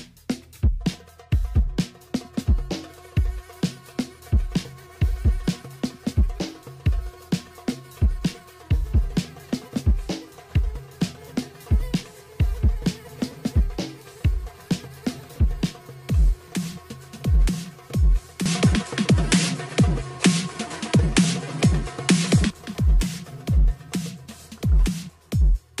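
From 18.46 s to 22.50 s the top end disappears, with nothing above 11.4 kHz. A faint new background noise sits roughly 45 dB below the sound. There is no gap and no level jump. The likely cause is an input switched to a poorer device.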